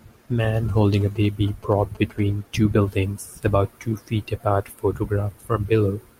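From 0.54 to 2.20 s, before "two buildings about two", a galloping dit-dit-dit of short 217 Hz buzzes sits about 25 dB under the speech. These are GSM signalling bursts from a nearby phone, rectified by the audio circuit.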